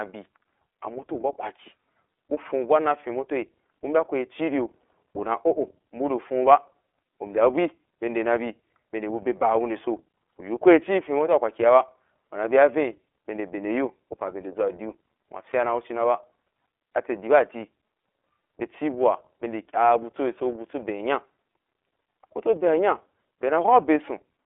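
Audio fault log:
Throughout, iLBC codec: speech band-limited near 300 Hz to 3.5 kHz, rough and synthetic from independently coded 30 ms frames, likely about 13 kbps, unlike muffled low-pass filtering.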